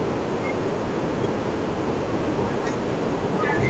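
No faults can be heard in this speech; its content stops at about 8 kHz, which fits the microphone processing and wideband Opus coding of a normal call path.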